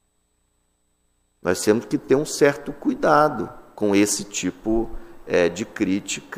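At about 4.12 s the sound suddenly jumps ahead, with no gap or silence, just a hard splice. That's a dropped buffer (overrun): most likely the software didn't pull its samples off the hardware in time, so that chunk got overwritten and the audio on either side was stitched straight together. Only around 15 ms goes missing, so you hear it as a small skip rather than an obvious hole.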